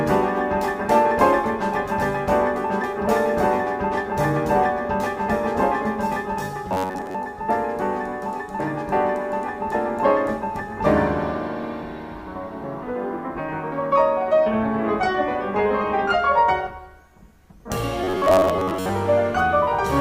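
A rigid, metallic buzz at about 94 Hz is heard from 6.69 to 7.16 s and 18.04 to 18.90 s: robotic sound, likely from repeating roughly 11 ms buffers.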